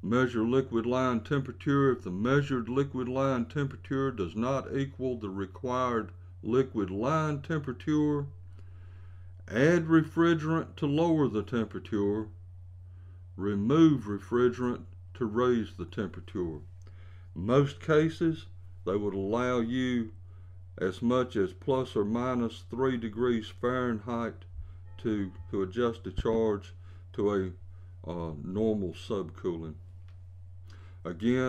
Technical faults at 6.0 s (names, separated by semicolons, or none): none